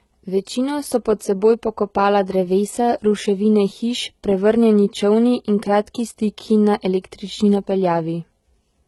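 Throughout, sibilants sound gritty and lispy, with treble stopping near 11.8 kHz, likely heavy HE-AAC compression at a very low bitrate, rebuilding upper bands by copying lower ones.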